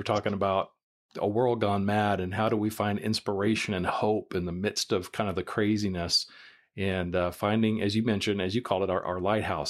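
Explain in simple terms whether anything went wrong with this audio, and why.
Nothing went wrong here; no faults can be heard.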